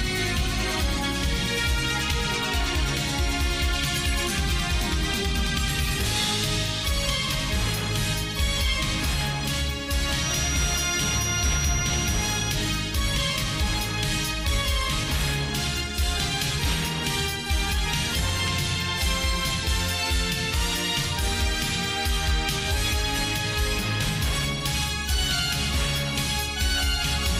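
A feedback whistle runs from 10.13 to 12.65 s: a thin, steady tone at about 5.8 kHz, sitting a few decibels below the main sound and swelling and fading slowly in level. It is likely a loudspeaker-to-microphone loop held just at the edge of feedback.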